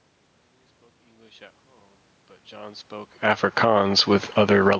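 From 3.1 s to 4.75 s there is automatic gain falling: the gain control judged the input too loud, or its background noise too strong, and pulled its gain down by about 6 dB over more than a second and a half. The speech and the room noise behind it sink together, so the drop sounds like the whole scene receding rather than the talker changing. On a waveform the envelope tapers steadily toward the end, and a spectrogram shows the noise floor darkening in step with the speech bands.

Overlapping that, from 3.66 s to 4.33 s, automatic gain rising pushes the level back up by about 9 dB. The input had dropped by about 22 dB, around where the talker shifts position near 3.0 s, and the control answered by boosting everything over roughly two-thirds of a second. Speech and background swell together, so the room noise climbs with the voice. On a waveform the amplitude bulges upward, and a spectrogram shows the background haze brightening along with the speech, up to the 8 kHz ceiling of the call processing.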